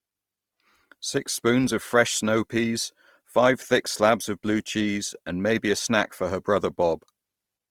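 Opus compression runs from start to end of this speech clip, audible throughout as a grainy, rough texture. The damage is likely from the encoder working in its music (CELT) mode at a low rate, which fits roughly 24 kbps while keeping full bandwidth. With too few bits, it preserves each band's energy but fills the detail with folded copies of lower bands or noise, so the sound turns coarse and noisy without thinning at the top.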